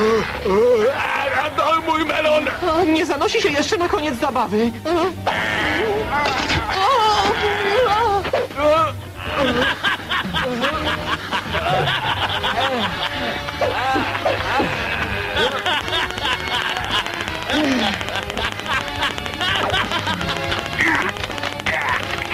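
At 5.29 s the sound jumps abruptly forward. This is a stream segment skipped. A chunk of the programme never arrives, and playback resumes at a later point. The likely cause is one segment of a segmented stream failing to load, so the player moved on to the next. The join is audible as a small blip. A stretch of material is simply absent.

From 15.52 s to 22.27 s a train of clicks runs over the audio. Short, similar pulses arrive at a steady 13.7 per second, evenly spaced. That adds up to about a hundred clicks. They peak around 15 dB above the underlying sound, so they dominate as a sharp ticking. The ticking also carries through quieter moments. The likely source is interference from nearby equipment or a faulty connection, injecting a pulse at a fixed rate.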